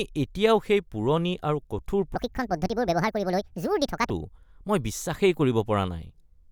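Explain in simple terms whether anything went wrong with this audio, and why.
Something did go wrong. From 2.15 to 4.10 s the speech has a section at the wrong speed: it plays about 1.63 times too fast, so the voice jumps up by roughly ten semitones and sounds chipmunk-like and rushed, then drops back to normal. Because pitch and pace rise together, this isn't a person simply talking faster or a pitch effect alone. The likely cause is that this stretch was played back at the wrong clock rate.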